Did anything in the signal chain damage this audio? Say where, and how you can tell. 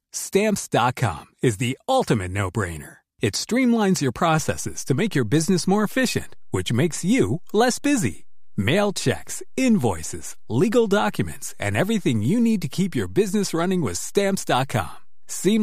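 Yes. There is a DC step at 4.38 s, right after "streamlines your", at the converter or analogue input stage. The waveform's zero line jumps by about -34 dBFS and stays shifted until the end of the clip. That sudden baseline shift is heard as a single low thump while the speech carries on unchanged. This points to a converter recalibrating or an offset-carrying input being switched into the path mid-recording.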